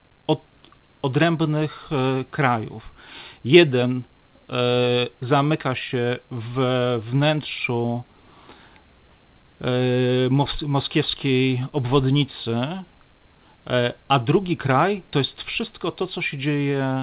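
No technical faults can be heard in this recording.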